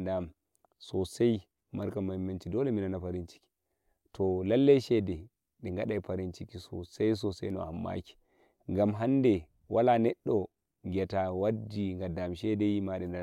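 No technical faults can be heard anywhere in the speech recording. With no event standing out from the surrounding sound, there is nothing to place in time order.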